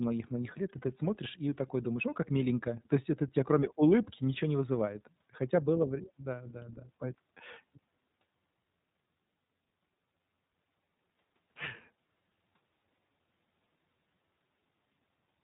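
From start to finish this speech runs through the iLBC codec, and you can hear it plainly. Everything above about 3.8 kHz is gone, so it has that narrowband phone-line dullness. The codec works in 20 ms frames and codes each one's excitation on its own, and that gives the speech a slightly rough, synthetic grain. The bandwidth and the character fit iLBC's 15.2 kbps mode.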